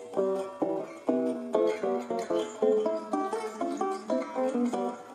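No technical faults can be heard in this recording.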